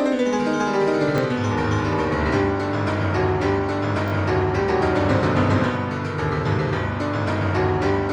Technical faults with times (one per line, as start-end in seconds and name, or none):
1.18-1.20 repeated buffer
4.08-4.12 repeated buffer